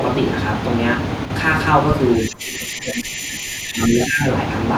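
Speech, with three faults. From 1.25 to 1.30 s the sound drops abruptly by about 6 dB for a brief moment, then recovers. This is a one channel drops out fault: one stereo side most likely vanished briefly, so the mono sum lost half its shared content. From 2.16 to 4.3 s a faint, delayed copy of the talker trails the original by 385 ms, sitting roughly 15 dB below it. That is an echo leak: a loudspeaker's output likely reached the far-end microphone and slipped past an echo canceller that did not fully remove it. Overlapping that, from 2.25 to 4.22 s, the talker's level sags, at worst by around 15 dB, across about two seconds in total. This is speech suppressed in double talk, likely from the echo canceller turning down the talker while both sides spoke at once.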